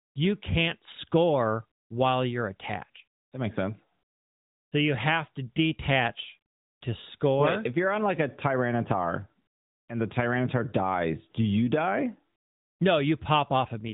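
No faults are audible in this speech clip.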